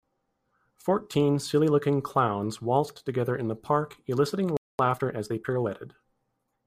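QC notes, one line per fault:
4.57–4.79 s playback stall: right after "in the park eliciting" the speech drops to silence for about 0.22 s, then picks up again. The player likely ran short of data or had its output thread held up, so nothing reached the output until it recovered.
4.79–5.67 s time-compressed catch-up: the speech that follows sounds hurried, at 1.25 times normal speed but at its usual pitch. The player is working off its backlog by removing short slices and cross-fading across the joins.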